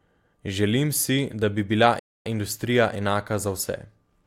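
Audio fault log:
1.99 to 2.26 s, rebuffering stall: the speech cuts to dead silence for about 0.26 s, then picks up exactly where it broke off, with nothing skipped and nothing repeated. The player ran out of downloaded audio and had to wait for more data, so the gap adds time instead of removing any. On a waveform it shows as a flat line splitting the signal cleanly. On a spectrogram it is a blank vertical band with no energy at any frequency.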